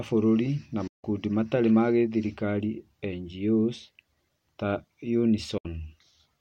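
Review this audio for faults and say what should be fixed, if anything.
Digital broadcast dropouts mute the speech from 0.87 to 1.05 s and from 5.58 to 5.66 s. Each is a quick 8 ms fade into true silence, consistent with the receiver rejecting corrupt frames and muting. The 160 ms and 64 ms gaps are clean holes with no repeated or smeared sound, which sets them apart from concealment glitches. Improving reception margin or adding stronger error protection on the link would prevent these gaps.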